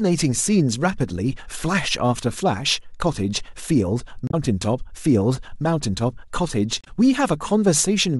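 A short, harsh blip cuts into the speech from 4.27 to 4.34 s, and again from 6.81 to 6.88 s. Both are damaged data in a compressed stream: corrupted bytes make the decoder misread those frames and lose sync until it finds the next valid frame header.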